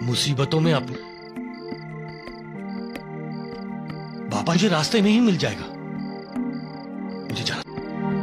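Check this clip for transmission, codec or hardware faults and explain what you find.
There is one kind of fault: damaged data in a compressed stream. It occurs three times, at 0.89 to 0.95 s, 4.51 to 4.57 s and 7.62 to 7.67 s. Each lasts roughly 50 to 60 ms. Part of the encoded data there was wrong or missing. The decoder could not read those frames correctly, lost sync and had to find the next valid frame header. Each spot is heard as a brief disruption, such as a chirp, squawk, click or short hole in the sound.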